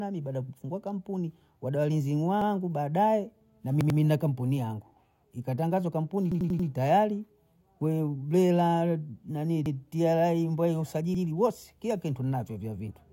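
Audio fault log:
2.42–2.51 s, 3.81–3.99 s, 6.32–6.69 s, 9.66–9.75 s, 11.15–11.24 s: repeated buffer. Fresh audio arrived late, so the same 93 ms block replayed, once, twice at 3.81 s, four times at 6.32 s. Each repeat gives a hard-joined stutter, which fits a 4096-sample buffer.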